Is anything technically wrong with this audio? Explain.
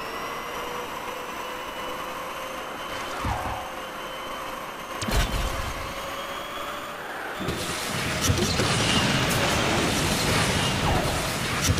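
Yes, there's a doubled audio track throughout: a quieter copy, roughly 10 dB down, trails about a fifth of a second behind, likely from a second, slower capture path, giving a dry, flat echo.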